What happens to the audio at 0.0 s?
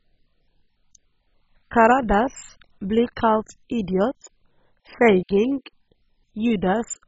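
From 0.0 s onward the speech is dull and gurgling, likely heavy MP2 compression near 16 kbps: starved sub-bands vanish above 7.5 kHz and the rest sound coarsely quantised.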